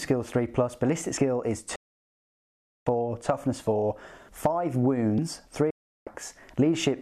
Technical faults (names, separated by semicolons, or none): dropped buffer (overrun); digital broadcast dropout